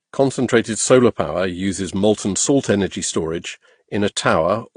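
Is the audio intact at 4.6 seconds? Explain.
No. At 4.6 seconds, as across the whole clip, the speech was likely passed through a low-bitrate AAC encode and then re-encoded with Vorbis, which is transcoding between lossy codecs. The second encoder spends its bits preserving the first one's damage and adds its own, while the lowest band limit in the chain carries through. Nothing sounds above about 9.8 kHz, so the speech is dull, and two layers of different compression artefacts can be heard together.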